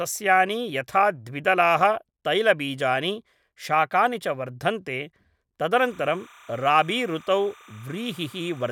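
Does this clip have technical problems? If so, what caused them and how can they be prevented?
Yes. Timecode bleed runs from 5.73 s to the end. Linear timecode leaks in from a nearby track or cable. Its square wave flips between roughly 1 and 2 kHz. That gives a chirping warble, about 25 dB under the speech. Keep timecode lines isolated from audio paths.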